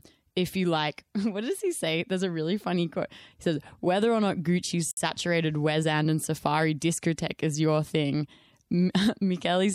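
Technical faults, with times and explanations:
4.91 to 4.97 s, gap at a join of encoded pieces: the speech was encoded as separate pieces and joined without trimming. The encoder's start-up delay at the head of one piece and the padding on the last frame of the other were left in place, so a gap of about 59 ms sits inside continuous speech. Its edges are smeared by the codec, so the silent part is shorter, and the speech resumes exactly where it broke off.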